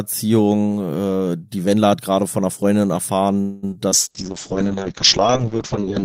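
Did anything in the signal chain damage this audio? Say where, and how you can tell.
Yes. Around 3.41 to 3.65 s the speech stalls for about 0.21 s. The last sound is stretched into a fading buzz or hiss, then it picks up exactly where it left off. That's a call audio freeze at the network stage, likely late packets draining the jitter buffer.

Right after, there's short concealed packet loss at 3.71 to 3.74 s and again at 3.90 to 3.93 s, each a brief smear or wobble. Roughly 20 ms went missing each time, and the decoder papered over it by extrapolating the preceding sound before blending back in.

From 3.94 s to the end there's a call bitrate drop. The encoder falls from 32 to 7 kbps, so the speech goes rough and watery, and the top end collapses from 20 kHz to 8 kHz, leaving it audibly muffled.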